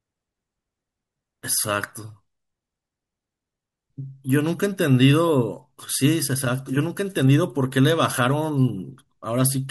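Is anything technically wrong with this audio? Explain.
No, nothing in the signal points to a technical fault.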